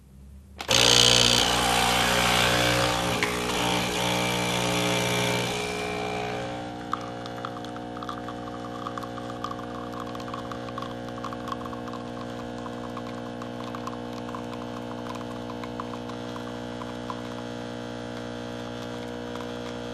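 From start to finish the audio sounds dull and gurgly, with a granular, watery roughness that's pretty obvious. That points to MP2 compression as the likely cause. Layer II splits the signal into 32 sub-bands and shares a bit budget among them. Here the budget is tight enough that upper bands drop out and flicker back, and what remains is coarsely quantised. The damage fits a rate of around 80 kbps.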